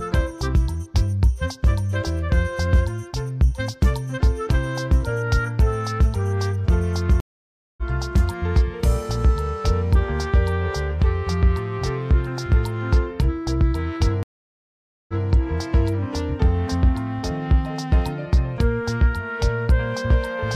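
At 7.20 s a stream reconnect cuts the audio for 0.57 s. A fresh decoder resumes about 0.7 s further on. At 14.23 s another reconnect brings 0.85 s of silence. Playback restarts 0.19 s earlier, repeating sound. Each restart briefly fades in.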